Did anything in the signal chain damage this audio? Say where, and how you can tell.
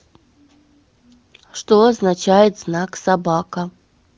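No, nothing in the chain damaged this audio.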